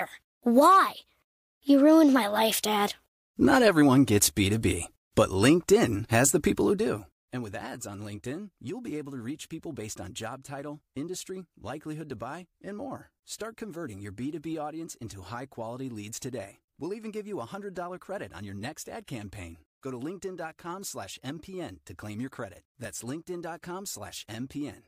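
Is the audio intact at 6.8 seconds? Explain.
No, at 6.8 seconds you're right in the middle of some zipper noise, which runs from about 6.47 to 7.46 s. The speech is being pulled down by roughly 15 dB there, but the gain moves in small unsmoothed jumps, something like 200 a second, instead of gliding. Each jump puts a tiny click into the waveform, so you hear a fine ticking or zipping texture riding on the speech while the level drops.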